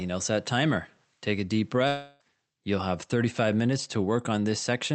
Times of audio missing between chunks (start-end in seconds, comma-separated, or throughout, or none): none